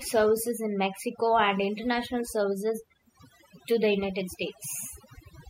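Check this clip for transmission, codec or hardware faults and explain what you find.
One processing fault runs through the whole speech clip: overdone noise removal, not a transmission or hardware problem. From start to finish, a noise reducer set far too strong switches off individual frequency bands whenever they sit close to its noise estimate, taking the quieter parts of the voice along with the noise. The background drops and breaks up into twinkling specks. On a spectrogram the gaps look dark and empty, scattered with isolated bright dots, and the speech harmonics appear ragged and patchy.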